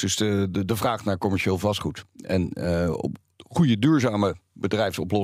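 Nothing here trips any alarm: the speech runs along without a single technical fault turning up at any point in the clip.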